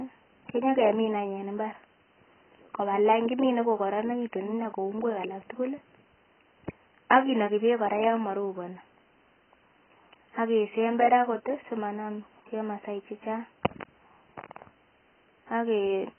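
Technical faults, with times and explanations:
Throughout, AAC compression: the speech sounds dull and smeared, with a warbling, fizzy edge on sustained sounds and sibilants, and nothing above 3.1 kHz. This heavy damage likely comes from AAC-LC at a very low bitrate, about 12 kbps. A spectrogram shows a flat ceiling at 3.1 kHz.
5.01 s, electrical switching spike: a sharp snap sits on top of the speech, lasting barely a millisecond. It is likely a nearby switch or static discharge arcing into the audio line. The waveform shows an isolated needle, and the spectrogram shows a thin vertical line across all frequencies up to 3.1 kHz.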